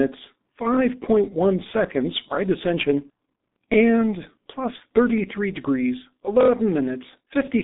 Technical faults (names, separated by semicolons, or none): G.723.1 codec